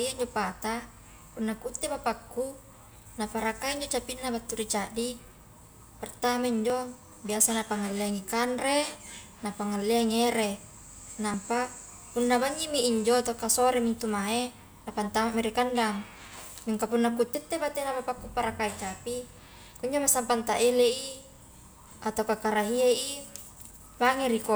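Speech with two short skips, at 6.70 s, between "pertama injo" and "biasa napangalleangi kanre", and at 11.34 s, with roughly 10 and 20 ms missing, likely a dropped buffer (overrun). The waveform shows an abrupt discontinuity, and the spectrogram shows a thin vertical broadband line.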